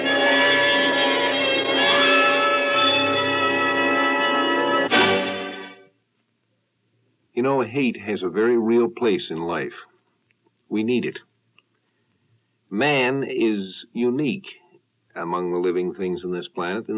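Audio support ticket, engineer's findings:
No audible fault found on review; no defect to attribute to any component in the signal chain.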